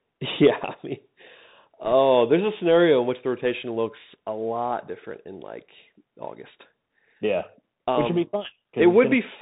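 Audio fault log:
Throughout: Bluetooth CVSD headset codec, plainly audible; one-bit slope coding at what sounds like a 64 kbps link cuts everything above 4 kHz, leaving scratchy s sounds and granular hiss.
1.85–1.92 s and 8.01–8.08 s: bit errors on a Bluetooth voice link, roughly one percent then about 0.7 percent; flipped bits give brief rushing crackle scaled to speech level, the first just before "there's a scenario in".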